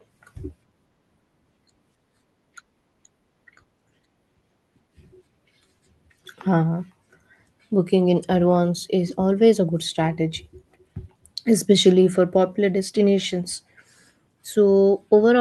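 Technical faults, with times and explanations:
No faults detected; the speech carries the normal band-limit of a WebRTC call path, with content stopping at 12 kHz, which fits Opus at around 24 kbps.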